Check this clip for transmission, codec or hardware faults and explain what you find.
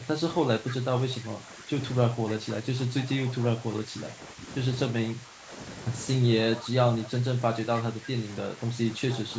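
Two faults show up in this speech, both pointing to the call's echo control struggling while both ends were talking.

Speech suppressed in double talk: from 0.0 to 5.52 s, 6.58 to 7.4 s and 7.93 to 9.28 s, the voice repeatedly sags and thins. The dips reach roughly 10 dB early on and are shallower near the end, affecting about two seconds in the first stretch and a few tenths of a second in each later one. The likely cause is the echo canceller misreading the local talker as loudspeaker echo during double talk and ducking everything at once.

Echo leak: a faint, delayed copy of the voice trails behind it at 0.69 to 0.76 s, 3.26 to 3.44 s, 6.53 to 7.09 s and 9.11 to 9.18 s, arriving 303 ms late and sitting well below the direct sound, roughly 15 to 25 dB down. These are short scraps, not a steady repeat. They are likely loudspeaker output reaching a microphone on the loudspeaker side and slipping past its canceller, then being sent back. 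The band stops at 8 kHz, which is consistent with normal call microphone processing.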